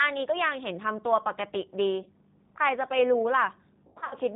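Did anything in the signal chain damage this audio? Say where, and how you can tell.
Yes. At the codec stage, the whole clip carries G.729 damage: nothing above 4 kHz, and rough, synthetic-sounding speech that fits an 8 kbit/s VoIP codec.

On the network side, there's VoIP packet loss concealed by the speech codec at 2.03–2.08 s and 3.87–4.16 s. The decoder smears the last sound into a fading buzz or coloured noise, covering 30 ms, then about 180 ms scattered over 240 ms.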